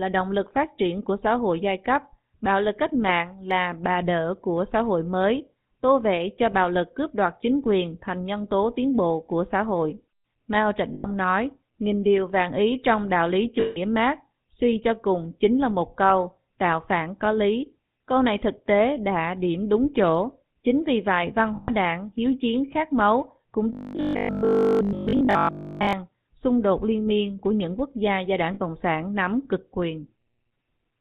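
From start to finish the speech carries the buzzy, gravelly roughness of the GSM full-rate codec, consistent with its 13 kbps mode. The codec rebuilds the voice from a vocal-tract filter driven by a sparse, regularly spaced pulse train, and the damage is plainly audible. On a spectrogram, energy stops abruptly at 4 kHz, and the harmonics look smeared and grainy rather than cleanly striated.

Lost GSM frames come at 10.94 to 11.06 s (about 100 ms), 13.60 to 13.78 s (about 160 ms), 21.56 to 21.71 s (about 120 ms) and 28.54 to 28.61 s (about 60 ms). The lengths fit runs of 20 ms frames. Each gap is covered by replaying the last good frame's parameters at a falling level, so the sound hangs as a brief metallic ring. On the waveform, each shows as a short, decaying plateau of repetitive texture. On the spectrogram, it appears as a frozen, horizontally smeared band.

From 23.73 to 25.93 s the voice turns into a rigid, metallic robotic sound, likely from repeated short buffers. 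Essentially all of this stretch is a short chunk replayed in place of fresh audio while the real signal is skipped. The 50 Hz buzz points to a 20 ms repeat length. The spectrogram shows evenly spaced 50 Hz harmonic lines, and the waveform shows a strictly periodic pattern.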